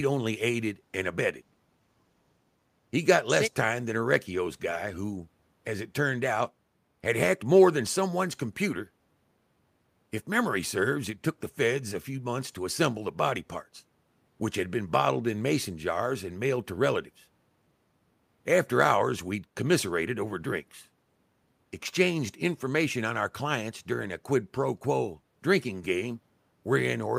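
No technical faults are audible.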